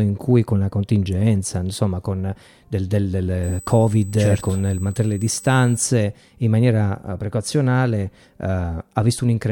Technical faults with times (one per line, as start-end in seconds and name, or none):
3.43-5.83 USB whine